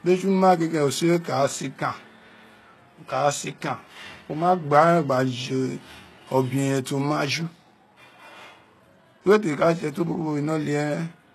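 Throughout, treble sounds gritty and lispy on s sounds, likely HE-AAC compression at a bitrate around 16 kbps; a spectrogram shows copied-looking upper bands ending sharply at 12.3 kHz.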